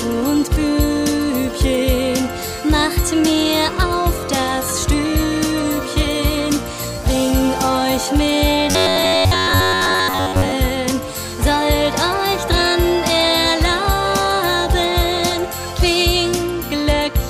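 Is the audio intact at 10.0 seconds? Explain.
No. From 8.71 to 10.52 s the sound becomes a rigid, metallic buzz at 93.8 Hz: robotic sound from repeated short buffers. Fresh audio likely arrived too seldom, so a chunk of about 10.7 ms was replayed in place of most of the real signal, imposing that fixed buzz.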